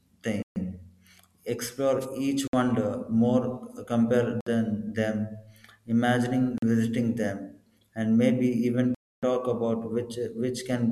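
The first dropout hits at 0.42 s, a clean 135 ms hole where the sound just stops and resumes, likely a Bluetooth stall from the headphone buffer running dry. At 2.01 s there's a wireless microphone noise hit, a quick burst of static lasting about 50 ms as the radio signal fades. The same stall gap returns at 2.48, 4.41 and 6.58 s (around 40 to 60 ms each), then a longer 282 ms one at 8.95 s, right before "talk about".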